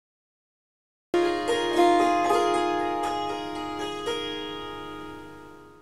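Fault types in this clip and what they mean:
Cut-off start, 0.0 to 1.14 s: the audio holds pure digital silence for just over a second, then the sound appears abruptly at 1.14 s already in progress, with no build-up or fade-in to introduce it. This happens when capture or playback of a stream begins after the sound itself has started, so the first portion is lost and whatever was underway is joined partway through, leaving an unnaturally hard entry.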